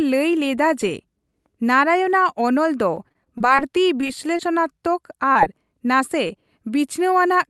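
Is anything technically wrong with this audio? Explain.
Yes, the speech has two kinds of packet-loss damage.

From 2.95 to 3.63 s, right after "ᱚᱱᱚᱞ ᱫᱚ", repeated packet loss (robotic sound) sets in. Seven gaps, the longest 27 ms, are each patched by extending the preceding sound, leaving about 17% of the stretch synthetic and giving a choppy texture with pieces missing.

Short concealed packet loss occurs at 4.01–4.05, 4.07–4.11, 4.37–4.41, 5.33–5.37 and 6.27–6.31 s. Each drops about 20 ms, which the decoder bridges by continuing the last sound, so each is heard as a brief smear or wobble.

These losses occur on a call-codec path whose upper cutoff near 12 kHz points to Opus at a moderate bitrate.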